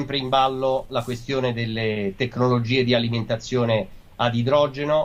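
At 1.93 to 1.97 s there is a brief smear, a wobble where the sound seems to stall. This is short concealed packet loss: about 20 ms of audio arrived too late, and the receiver filled the gap by extending the preceding sound before blending back.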